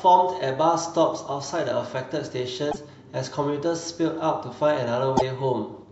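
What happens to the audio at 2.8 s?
Frames were likely dropped from the MP3 stream, so the following frames reached back into the bit reservoir and decoded another frame's bytes. That is a broken MP3 bit reservoir, and from 2.71 to 2.76 s, about two 26.1 ms frames, the speech jumps ahead through a brief garbled disturbance.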